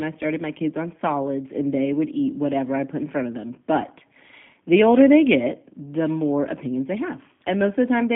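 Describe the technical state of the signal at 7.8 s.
At 7.8 s the G.729 codec damage persists, as throughout: speech rebuilt from filter and pulse models sounds rough and synthetic, and the spectrogram shows a hard ceiling near 3.7 kHz.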